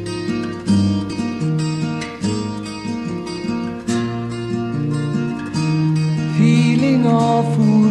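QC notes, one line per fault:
1.09 to 1.14 s, compressed frames skipped: roughly a tenth of a second of audio is missing and the sound jumps forward.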